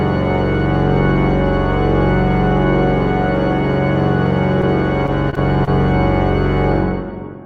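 From 5.06 to 5.69 s the audio turns choppy, with a robotic, stuttering edge as what sounds like four brief holes break up the stretch, the longest about 29 ms. This is repeated packet loss (robotic sound). Data kept failing to arrive in time, and each gap was bridged by extending the preceding sound, about 84 ms in all, roughly 13% of the stretch. Around 20 ms could not be covered and simply drops out.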